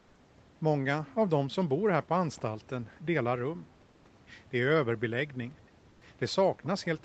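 Speech over a call link, and the background gets swapped out twice: from 0.00 to 0.15 s and again from 5.89 to 6.01 s it turns into a flat, featureless hiss about 2 dB quieter. That's comfort noise in place of the background, likely from Opus DTX filling pauses the sender didn't transmit. Around 2.33 to 2.42 s there's a brief echo leak, a very faint copy of the voice trailing about 276 ms behind, most likely a loudspeaker pickup the far end's echo canceller didn't fully remove.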